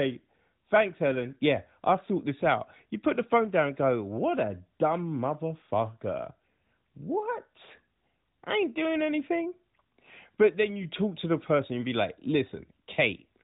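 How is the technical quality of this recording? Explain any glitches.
No glitches or faults can be heard here.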